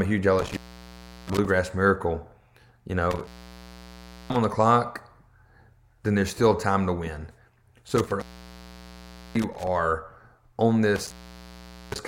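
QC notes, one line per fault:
0.39–1.45 s, 3.11–4.44 s, 7.89–9.67 s, 10.96–12.05 s: intermittent contact. The speech drops out four times, for about 0.71 s, 1.03 s, 1.13 s and 0.80 s, as a loose plug or cable briefly opens the signal path. Each gap is bracketed by crackle where the contact scrapes, leaving faint hiss. The waveform shows sudden flat stretches with sharp spikes at their edges. The spectrogram shows vertical broadband streaks around near-empty gaps.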